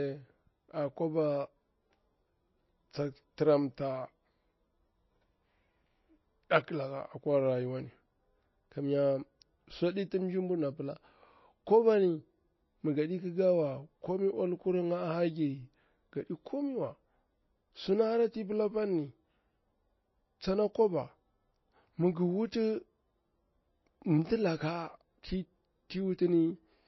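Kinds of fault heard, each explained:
MP3 compression: The speech sounds dull and watery throughout, with a swirling texture and nothing at all above 5.8 kHz. The likely cause is heavy MP3 encoding at a bitrate of about 22 kbps. Starved of bits, the encoder chops off the treble at a fixed point and discards weaker frequency components, which flicker in and out between frames and leave the plainly audible smeared, bubbling quality heard here.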